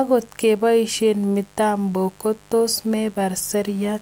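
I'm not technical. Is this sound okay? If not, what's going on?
No. A steady, raspy buzz sits quietly under the speech the whole way through. That's mains buzz: electrical interference from the 50 Hz power supply leaking into the recording.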